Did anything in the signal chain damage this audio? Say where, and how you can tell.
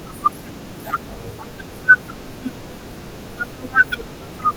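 Yes, at the codec stage: compressed frames were skipped at 2.97 s and 4.18 s. The speech jumps ahead by roughly 70 ms and 50 ms. That points to a decoder with 10 ms frames.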